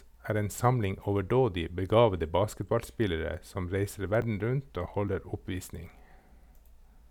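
At 4.22 s, just after "begavede basketballspillere som reiser", the speech jumps forward. A tiny slice, a few milliseconds, is missing, with no gap of silence. At 5.08 s a second, larger jump skips roughly 10 ms. Both are likely a dropped buffer (overrun). The software failed to read its samples before the hardware overwrote them. The audio on either side was spliced straight together.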